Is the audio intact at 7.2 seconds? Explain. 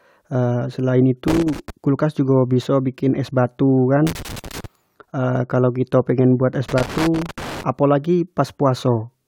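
No. From 6.69 to 7.63 s a loose connector crackle occurs: a worn contact rapidly makes and breaks, chopping the speech into an irregular burst of crackling and scratching.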